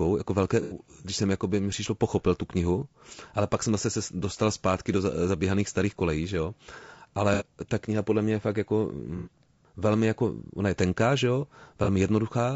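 Czech speech, and the whole thing has a rough, grainy edge with a thin synthetic top, likely low-delay AAC compression (AAC-ELD) at around 32 kbps. There's also AAC frame loss with concealment, heard as smeared, noisy patches at 0.62–0.76 s after "jako velké", 7.34–7.45 s, 9.17–9.31 s after "mě je fakt jako", and 11.84–11.89 s after "je tenká že jo", with the decoder papering over gaps of about 30 to 90 ms.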